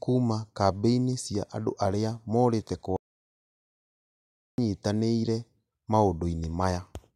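At 2.96 s the speech cuts to total silence until 4.58 s. This audio dropout to silence loses 1.6 s, likely from a lost input writing zeros.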